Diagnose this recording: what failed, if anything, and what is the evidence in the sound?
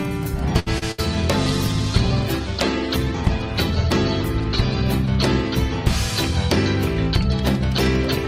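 At the network and jitter-buffer stage, a short stall from a late packet runs from 0.59 to 0.68 s. The last sound is held for about 70 ms with a faint buzz or dip, then resumes exactly where it stopped, so nothing is lost. Playback simply falls 70 ms behind, which separates it from true loss.

A short concealed packet loss follows at 0.78 to 0.83 s. Roughly 30 ms of extrapolated sound bridges about 20 ms of missing audio, heard as a brief smear or wobble. Unlike the stall, material is actually gone, but the gap is too short to fade.

A burst of packet loss at 0.91 to 1.00 s is longer. About 66 ms of concealment continues the last sound and turns it down into a held buzz or fading hiss. Audio then picks up some 60 ms further on, skipping what came in between, which a stall never does.

A call bitrate drop at the codec stage starts at 1.48 s and lasts to the end. The encoder falls from 128 to 12 kbps, staying at its lowest for 2.32 s. 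Coarse coding makes the sound rough, watery or muffled, with the highs trimmed. It is continuous degradation rather than gaps.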